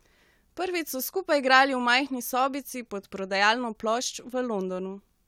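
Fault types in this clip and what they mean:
Nothing to flag here, as no technical faults turn up anywhere in this bit of speech.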